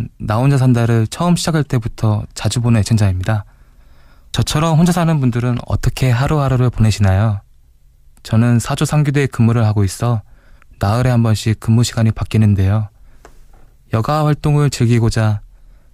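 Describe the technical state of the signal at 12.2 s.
At 12.2 s the speech signal is intact, with no audible fault present at that moment.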